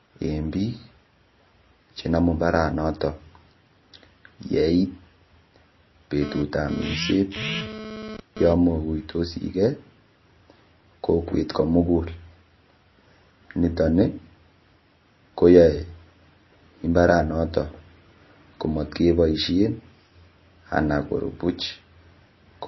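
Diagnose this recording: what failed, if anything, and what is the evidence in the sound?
The codec stage fails throughout: the speech is watery and swirly, with chirpy sibilants and nothing above 5.8 kHz. A fixed treble cut with flickering detail, rather than the gentle roll-off of a plain low-pass, points to likely MP3 compression at a low bitrate, around 24 kbps.

A GSM phone buzz from analogue wiring intrudes from 6.22 to 8.53 s. It is a hard, raspy 217 Hz buzz, about 13 dB below the speech, that comes and goes with a data transfer. Unlike mains hum, it is harsh and sits at 217 Hz, set by radio bursts rectified in the audio circuit.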